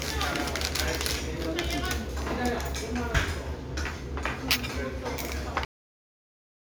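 At 5.65 s the sound stops dead in the middle of an event. This is a cut-off end. The final buffers were never written or played. There is no natural decay. Digital silence follows and runs for nearly a second, until the file ends.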